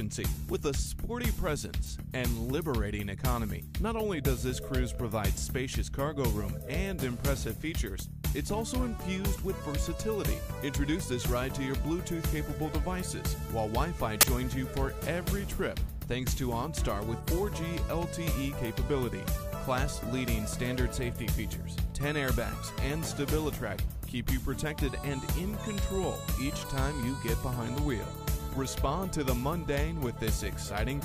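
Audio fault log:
14.21 to 14.23 s, file tags played as audio: a 22 ms burst of very loud white noise with hard, square edges cuts abruptly into the sound. The bytes are compressed data from an embedded cover picture, read by the player as samples, so they come out as dense random static. Unlike a single corrupt-sample click or a clipping crackle, it is a solid block of flat noise at a very loud level that starts and stops instantly.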